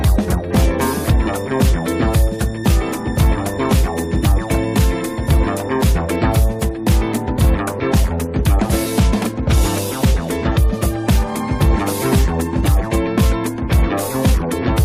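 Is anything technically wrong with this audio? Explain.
No, nothing stood out as technically wrong on listening.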